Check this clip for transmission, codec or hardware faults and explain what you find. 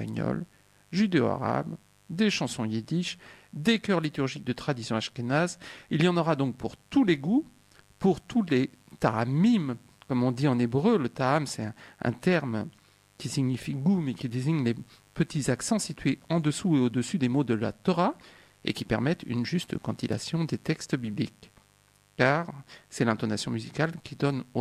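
One hardware fault runs through the clip. Mains buzz, present throughout: sharp switching spikes from a dimmer, rectifier or unshielded cable enter twice per 50 Hz cycle, spraying harmonics into the kilohertz range. The result is a steady, raspy buzz sitting roughly 35 dB below the sound.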